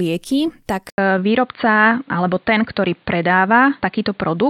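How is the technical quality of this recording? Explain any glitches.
The recording degrades sharply at 0.9 s. The input was likely switched to a poorer device at that point, with the system changing microphones or moving to a headset's call profile mid-recording. After an 80 ms silence at the switch, the speech runs to the end through a narrower band with nothing above 4.6 kHz, so it sounds dull and boxy. The level also shifts by about 5 dB, and a new, faint background noise sits well below the speech.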